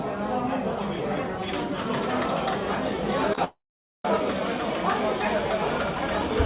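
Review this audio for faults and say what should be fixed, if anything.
Short concealed packet loss occurs three times in quick succession: at 3.28 s, then 3.33 to 3.35 s and 3.35 to 3.38 s. Each gap is about 10 ms, which fits single lost 10 ms packets. The receiver extended the preceding sound briefly to cover each hole before rejoining the real signal. The result is a small smear or flutter in the sound rather than a clean cut.

A long network dropout follows from 3.44 to 4.05 s, removing roughly 0.6 s of audio. The decoder first continues the last sound as a fading buzz or hiss, then gives way to about 0.47 s of silence before the signal resumes later in the stream, with the missing portion gone for good. This is likely a network stall that delivered no packets for that stretch. The signal above about 4 kHz is absent throughout, consistent with the narrowband G.711 call path.

To prevent both problems, stabilise the network route, add forward error correction or redundancy, and allow a deeper adaptive jitter buffer so that late or lost packets can be recovered before playout.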